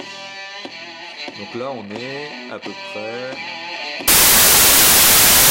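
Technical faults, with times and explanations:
4.08–5.51 s, samples built from the wrong bytes: to the end of the clip, each sample is assembled from mismatched bytes, through a byte offset, a swapped byte order or a wrong alignment. The rapidly changing low-order bits land in the most significant positions, so the sound turns into broadband noise.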